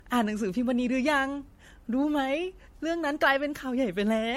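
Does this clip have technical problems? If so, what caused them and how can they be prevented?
Yes, generation loss runs throughout this speech: swirly, hollow smearing and blurred attacks beyond a single 64 kbit/s MP3 encode, with nothing above 16.4 kHz, likely from about five re-encodes. Keep a lossless master and encode to MP3 only once.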